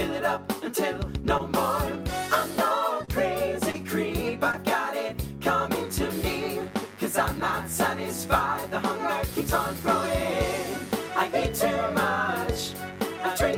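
Between 1.37 and 4.55 s, four packets failed to reach the decoder in time, at 1.37–1.41, 3.05–3.09, 3.71–3.76 and 4.52–4.55 s. Each time, short concealed packet loss filled the hole by extending the preceding sound, about 14 to 24 ms at a time, before blending back. Each leaves a brief smear or wobble. Packets lost alongside these were rebuilt from error correction at 1.39–1.41, 3.11–3.13, 3.74–3.76 and 4.53–4.55 s. In each case a 20 ms low-bitrate copy carried in the following packet played in place of the original, so there is no gap, but those moments sound rougher and noisier. From 5.73 s to the end, mains buzz enters. Switching spikes at twice each 50 Hz cycle spread harmonics up into the kilohertz range, producing a steady, raspy buzz roughly 20 dB below the main sound.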